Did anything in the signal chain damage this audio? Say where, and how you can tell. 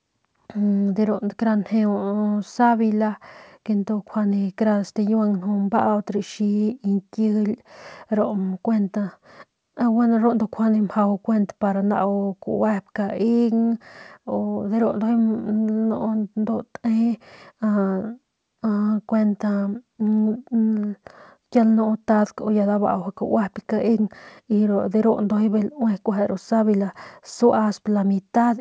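No, nothing in the chain damaged it; the speech went through a call path whose codec, most likely G.722 given the way the spectrum stops at 8 kHz, sets that band limit as designed rather than as a fault.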